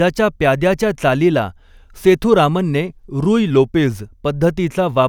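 From 3.50 to 4.02 s the speech slows by 5.2% and drops in pitch by 93 cents, close to a semitone, then snaps back to normal. This is a drift correction step, likely from clock-matching software changing the playback rate at once to rebalance its buffer. Speed and pitch move together and in a single jump, unlike tape wow, which slides and wobbles continuously, or a pitch shifter, which alters pitch without changing timing.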